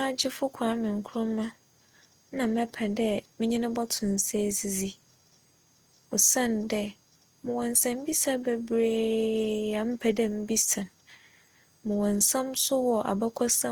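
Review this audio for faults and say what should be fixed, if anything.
Opus compression damage runs through the whole speech clip. The speech sounds grainy and rough. Sustained voiced sounds take on a noisy texture instead of clean harmonics. The top end stays present, so the band is not narrowed. This points to the codec's music mode filling starved bands with folded or noise-like energy. The likely cause is encoding at a low rate, around 24 kbps. Prevent it by encoding speech at a higher Opus bitrate.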